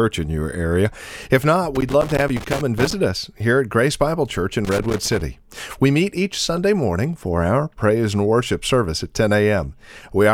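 From 1.75 to 2.93 s, just before "us here at", and again from 4.65 to 5.21 s, there's loose connector crackle: a dodgy contact chopping the speech into irregular scratchy bursts.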